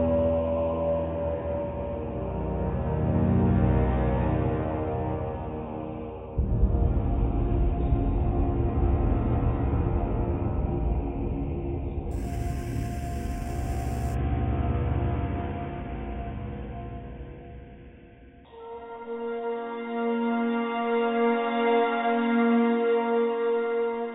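Imaging from sample-and-hold upsampling runs from 12.11 to 14.15 s: repeated samples without smoothing mirror the spectrum, adding a metallic fizz about 24 dB down between 4 and 8 kHz, which fits audio raised from 8 kHz.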